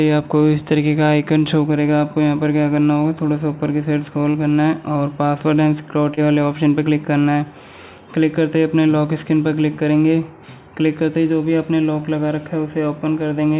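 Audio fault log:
4.31 to 4.37 s and 6.14 to 6.20 s, short concealed packet loss: about 30 ms went missing each time. The receiver stretched the preceding sound to cover it, causing brief smears.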